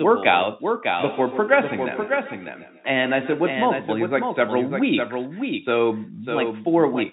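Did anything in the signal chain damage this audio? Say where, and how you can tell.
Yes. A second, slower capture path was likely mixed in, producing a doubled audio track: a dry copy, about 5 dB quieter, trails roughly 0.7 s behind throughout.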